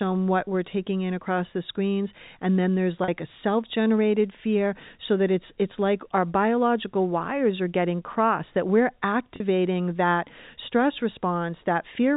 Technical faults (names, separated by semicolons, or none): packet loss with pitch repetition